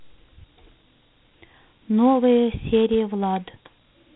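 Right through the clip you get Dialogic VOX ADPCM damage: everything above about 3.9 kHz is gone, and a gritty hiss rides on the speech, typical of 4-bit OKI coding at 32 kbps.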